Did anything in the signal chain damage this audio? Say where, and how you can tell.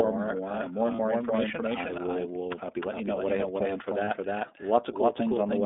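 Yes. The whole track is doubled: an identical, undecayed copy trails about a third of a second behind at roughly equal level, likely a second capture path in call processing.

At the codec stage, iLBC coding squeezes everything into a 250 Hz to 3.7 kHz band with a rough, synthetic edge, consistent with its 30 ms, 13.33 kbps mode.

On the network side, lost iLBC frames left two 30 ms gaps, at 0.96 s after "more uh more and" and at 4.05 s after "I have planned for". The decoder filled each with a short buzzy held vowel, then recovered immediately.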